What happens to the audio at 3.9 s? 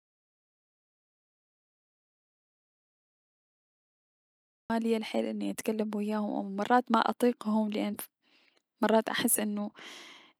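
The input was likely lost while the recorder kept writing silence, an audio dropout to silence running from the start to 4.70 s, so 3.9 s is dead silent until "ليا الحيل اني اتكلم".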